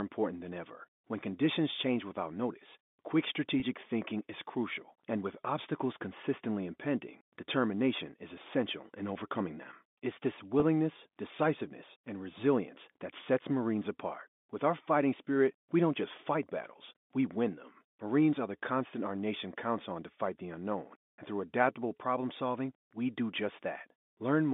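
At 3.60–3.62 s and 10.60–10.62 s, packet loss with pitch repetition: a 20 ms gap, fitting one lost packet, is bridged by repeating the last pitch period, giving a brief buzzy hold. The waveform shows identical copied cycles, and the spectrogram shows frozen harmonics.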